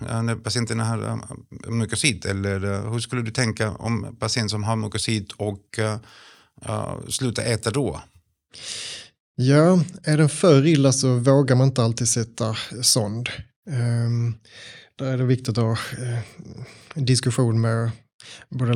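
No technical faults can be heard anywhere in the recording.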